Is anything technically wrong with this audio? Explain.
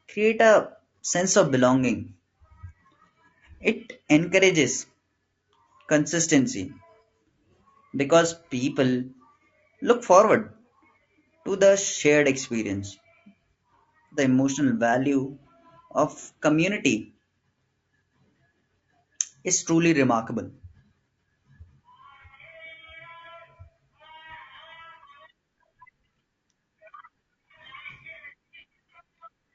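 Yes. Throughout the speech, there is plainly audible low-delay AAC compression, likely AAC-ELD near 32 kbps. Its short frames blur harmonics, giving rough, grainy speech, with noise-filled gaps between harmonic lines on a spectrogram.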